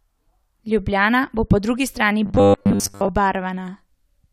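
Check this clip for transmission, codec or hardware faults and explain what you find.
One fault appears. From 2.26 to 3.09 s, just after "bo po drugi strani", robotic sound from repeated short buffers: audio likely arrived too rarely, so about 10 ms chunks were replayed, imposing a rigid 100 Hz metallic buzz over most of the speech.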